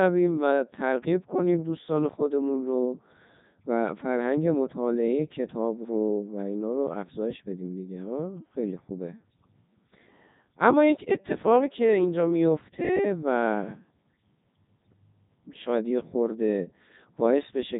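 From start to finish the speech carries heavy Codec 2 vocoder damage. The waveform has been discarded and rebuilt from pitch, voicing, energy and a coarse spectral envelope, then resynthesised from sine waves. The result is a robotic, buzzy voice. The level of degradation fits Codec 2's top 3.2 kbit/s mode, and nothing is present above 3.8 kHz, which leaves the sound narrow and muffled.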